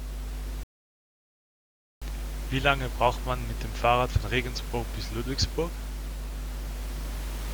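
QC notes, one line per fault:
throughout: mains hum, a steady 50 Hz tone with low harmonics sitting only about 5 dB under the speech, from power-line coupling through a ground loop or nearby transformer.
0.63–2.02 s: rebuffering stall, the speech drops to silence for 1.38 s as playback runs dry, then resumes exactly where it stopped, adding time without losing any.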